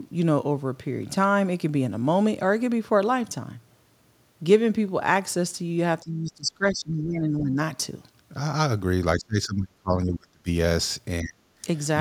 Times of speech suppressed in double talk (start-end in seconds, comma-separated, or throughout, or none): 6.03-7.58, 9.16-10.47, 11.22-11.46